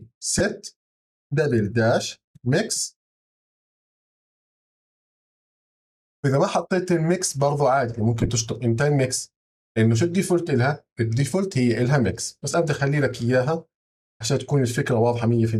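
Lost LE Audio frames: the Bluetooth link dropped audio at 0.39–0.41 s, 8.21–8.29 s and 12.51–12.54 s. The LC3 decoder filled each gap by reusing the last spectrum with random signs, so each gap becomes a brief noisy smear. The middle one breaks into several short bursts, the longest about 15 ms.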